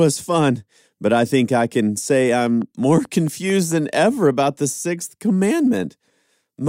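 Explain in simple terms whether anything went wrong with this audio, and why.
Just after "think I can say", from 2.40 to 3.96 seconds, a steady ticking runs over the speech until "about the sixth". It is a train of clicks: about seven sharp pops of much the same shape, evenly spaced at roughly four and a half per second, each about as loud as the voice itself. The likely cause is electrical interference from nearby equipment, or a faulty connection or power supply, pushing a repeated pulse into the recording.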